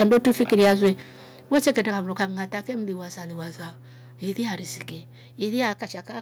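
The microphone input was likely set too high, so peaks hit the converter's limit. That microphone overload flattens the loudest speech into a harsh crackle from 0.0 to 0.89 s, about 10 dB over, with roughly a tenth of samples clipped. The call software then likely stepped the microphone volume down, and the level drops suddenly by about 2 dB at 0.02 s and about 6 dB at 1.02 s. Overload likely returns from 1.54 to 1.8 s, about 6 dB over, and briefly from 2.22 to 2.24 s, about 2 dB over. Right after that, at 2.25 s and just before "fe mliwasa liwasa ili", the volume likely steps down again by about 5 dB.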